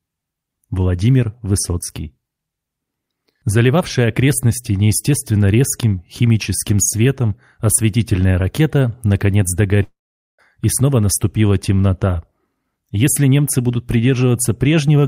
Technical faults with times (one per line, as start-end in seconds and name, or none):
9.83-10.40 long network dropout